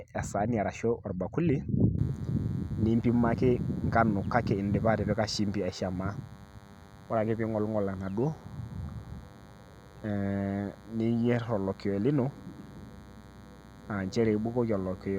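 Speech carries a DECT cordless phone buzz from 1.98 s to the end at 15.18 s. A nearby handset or base station's 100 Hz radio bursts are rectified into a thin buzz roughly 25 dB below the speech, showing as evenly spaced harmonic lines at multiples of 100 Hz on a spectrogram and 10 ms pulses in quiet waveform gaps.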